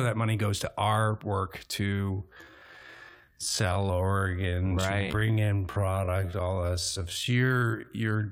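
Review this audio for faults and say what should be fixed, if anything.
Most likely, software time-stretched the audio to fill a longer slot, holding pitch steady by repeating short slices rather than changing the playback rate. From 1.85 s, just after "our work", to the end of the clip, the pace drops abruptly to about 0.55 times normal while the pitch stays the same. This time-stretched section drags, and the stretch is still audible around "your tax dollars right". To prevent it, trim or re-edit to fit the slot instead of stretching the audio.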